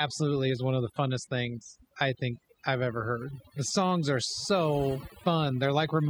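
From start to finish the pauses between phrases drop to near silence broken by twinkling, warbling specks. That is overdone noise removal: a noise reduction process set too aggressively has pulled individual frequency bands far down or out whenever they sat close to its picture of the background noise, and the softer parts of the voice, lying near that level, were stripped away along with the noise.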